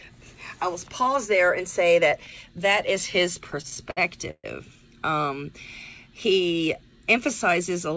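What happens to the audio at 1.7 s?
Nothing goes wrong at 1.7 s; the sound passes through intact, with only the call path's ordinary bandwidth ceiling of 8 kHz that is present throughout.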